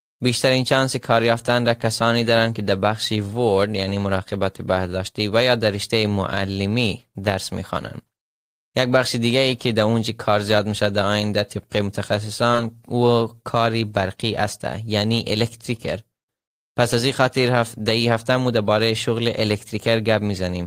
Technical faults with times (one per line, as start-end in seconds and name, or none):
12.51-12.56 short concealed packet loss